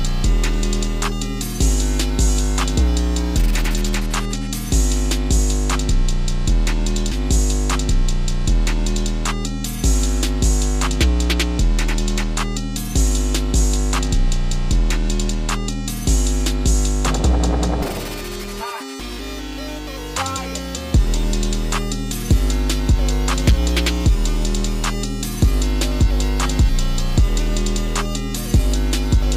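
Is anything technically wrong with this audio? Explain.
Yes, there's one clear problem: a stream segment repeated. At about 7.11 s the audio jumps back and replays the previous two seconds, running through to 9.11 s before carrying on, so the clip ends up 2 s longer than it should be. That happens when the player fetches or queues the same chunk of the stream twice and plays both copies in sequence. You hear a small blip at the jump back, then the same stretch of sound again.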